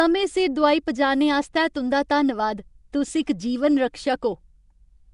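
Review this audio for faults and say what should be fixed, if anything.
Throughout the speech, a rough, hissy halo surrounds the sound, with a smeared, underwater quality, and nothing is present above about 10.6 kHz. The likely cause is Nellymoser compression: the codec spends a fixed, small bit budget on short blocks, and weak bands receive no bits and are filled with noise. The damage fits a low-rate setting around 44 kbps. A spectrogram would show a hard ceiling at 10.6 kHz and grainy, noise-filled patches where finer harmonic detail should be. To prevent this, capture and deliver with a modern codec such as Opus or AAC at an adequate bitrate, or keep the original uncompressed recording.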